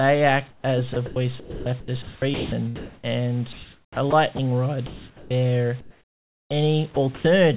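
From 0.50 to 0.64 s the background gives way to comfort noise: a flat, featureless hiss about 15 dB quieter than the real room sound. This is likely discontinuous transmission, with the receiver synthesising noise while the sender stays silent. The speech resuming at 0.61–0.64 s has an onset clipped by the voice detector. About 30 ms of its soft start is missing, most likely because the detector reacted late, so the sound begins abruptly.

Between 0.94 and 3.09 s the sound is chopped by the voice detector. About 1.1 s in total is replaced by fill, likely from the detector toggling transmission on and off. The same choppiness recurs at 3.53–4.39 s, with about 480 ms lost. The likely cause is again the detector switching repeatedly.

From 4.87 to 5.31 s comfort noise again stands in for the background, only about 2 dB quieter but audibly smoother, likely from another silent-period fill. The speech onset at 5.29–5.31 s is clipped by about 20 ms, likely a late detector decision.

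At 5.81–6.51 s the background is replaced by comfort noise about 10 dB below the real level, likely the sender suppressing transmission during the pause.

At 6.95–7.25 s the sound is chopped once more, with about 120 ms replaced, likely from the detector cutting in and out. Throughout, nothing passes above 4 kHz, which fits a narrowband G.711 call path.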